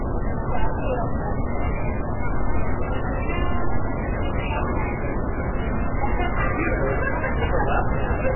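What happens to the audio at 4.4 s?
MP3 compression damage is present at 4.4 s and throughout the clip. Nothing is heard above 3 kHz, and weak frequency components flicker in and out between frames, giving a watery, swirly texture with smeared attacks, likely from a very low bitrate around 8 kbps.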